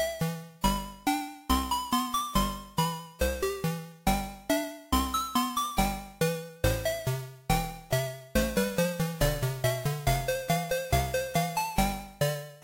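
No audible technical faults are present anywhere in the recording.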